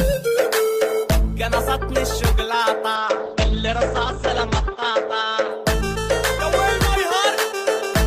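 A call bitrate drop from 2.97 to 5.57 s narrows the bandwidth from 20 kHz to 8 kHz, consistent with the encoder falling from 32 to 12 kbps, leaving the sound muffled and rough.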